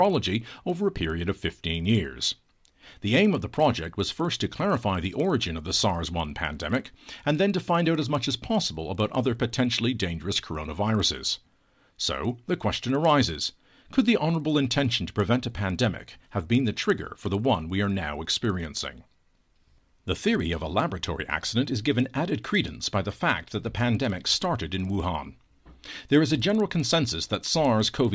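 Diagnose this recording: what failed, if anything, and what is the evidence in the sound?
Resampler restarted on every block at the buffer stage: a 20 Hz tick runs under the speech throughout, since each 50 ms block is converted from 44.1 kHz to 16 kHz blind to its neighbours.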